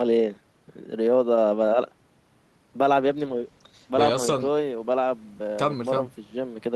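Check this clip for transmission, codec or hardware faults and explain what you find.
There is one fault, a call bitrate drop from 3.03 to 5.53 s. The bandwidth estimate fell, so the encoder coded the speech with far fewer bits. The sound turns rough and watery, worst for about 1.2 s, which fits a fall from 32 to 13 kbps.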